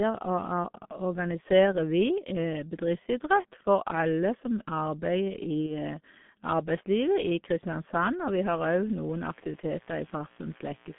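Throughout, the speech has passed through the G.723.1 codec at a very low bitrate, consistent with its 6.3 kbit/s mode, on a line limited to 150 Hz to 3.5 kHz. Its slow-updating voice model and narrow band leave the speech muffled and hoarse, with smeared consonants.

From 5.66 to 5.73 s, VoIP packet loss concealed by the speech codec appears: about 30 ms of data went missing, which fits one lost codec frame. The decoder extended its previous pitch and filter at falling gain, so the sound briefly stretches into a fading buzzy tone or coloured noise and stays weak and distorted as it recovers.

From 8.19 s to the end, mains buzz enters: switching spikes leak in twice per 60 Hz cycle, spreading harmonics high up the spectrum. It sits roughly 30 dB below the speech as a steady, raspy buzz.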